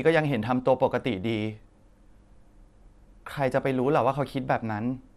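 From start to finish the speech sounds dull and gurgling, likely MP2 compression starved of bits; a spectrogram shows upper bands flickering on and off.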